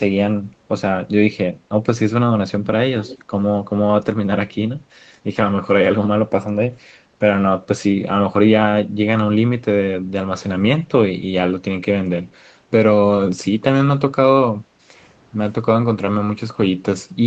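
In this speech clip, from 2.99 to 3.22 s a faint, delayed copy of the voice trails behind it, arriving about a quarter of a second late (around 241 ms) and sitting roughly 20 dB below the direct sound. It is brief. The likely cause is an echo leak: one end of the call was playing audio on a loudspeaker, and its echo canceller let part of what the microphone picked up slip through and return. From 14.6 to 14.9 s the room sound underneath the speech sinks by about 9 dB for roughly 0.3 s and then comes back. This is background gated by the echo canceller, which pulled the microphone level down hard while the far-end loudspeaker was active and released it once playback stopped. Throughout, the sound carries nothing above 8 kHz, consistent with the call's processing and codec path.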